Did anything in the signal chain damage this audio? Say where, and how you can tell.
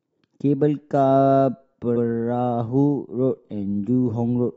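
Yes: repeated frames at the codec or storage stage. The speech at 1.95 to 2.04 s replays once, a 93 ms stutter consistent with four compressed frames written twice.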